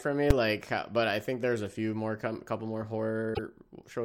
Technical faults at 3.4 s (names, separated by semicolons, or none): damaged data in a compressed stream